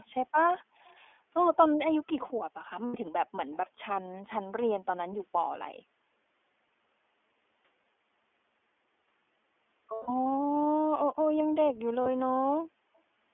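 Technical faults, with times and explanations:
Throughout, iLBC codec: The sound is confined to roughly 250 Hz to 3.4 kHz. It is plainly rough and synthetic, as each 20 ms frame is coded on its own.
0.00–0.06 s, 0.59–0.64 s, 0.85–0.97 s and 3.51–3.57 s, echo leak: A faint delayed copy, about 270 to 280 ms late, sits far below the speech. The likely cause is a loudspeaker echo the canceller missed.
2.86 s, 9.94–10.10 s and 12.02–12.07 s, lost iLBC frames: Gaps of 80, 140 and 40 ms are filled with a held, buzzy repeat of the last pitch cycle. The sound recovers almost at once.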